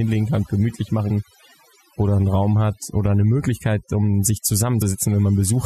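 Throughout the speech, the background sinks to near silence with twinkling specks: overdone noise removal, cutting individual frequency bands along with quieter voice detail. After "kann gemütlich", at 1.09 s, and after "um sich", at 4.81 s, brief glitches mark damaged data in a compressed stream, where the decoder misreads corrupted frames and resynchronises.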